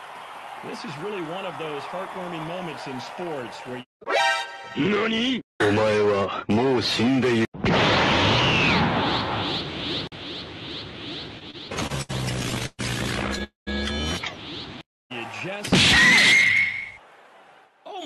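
From 11.39 to 12.81 s the audio shows repeated stalls (stutter): the jitter buffer ran dry thirteen times, each gap patched by stretching the preceding sound, the longest about 121 ms. Nothing is lost, yet roughly a quarter of that stretch is filler, so the sound drags and stumbles rather than halting once.

Two call audio freezes follow, single longer holds rather than a train of short ones. At 13.44 to 13.69 s about 230 ms is filled, the last sound fading to silence for roughly 130 ms. At 14.83 to 15.12 s about 262 ms is inserted, almost all of it silence. Both likely come from packets delayed in transit, with playback resuming exactly where it stopped.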